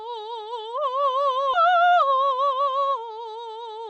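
A skip ahead at 1.53 to 1.55 s breaks this music clip. Playback jumps straight past roughly 0.7 s of material with no fill, so the passage before the jump butts directly against a later one. That is the sign of a receiver discarding queued audio, either lost in transit or dumped when an overfull jitter buffer overflowed, to catch up on accumulated delay. A jitter buffer speed-up follows from 1.64 to 3.32 s. The music runs at about 111% of its proper rate while keeping its pitch, so the tempo feels rushed and unsteady. The receiver is trimming many short pitch-period-length slices, around a fifth of a second in total, to drain a buffer still holding more audio than its target. Through all of this the sound carries the coding character of the Opus call path, with its high end stopping at 8 kHz.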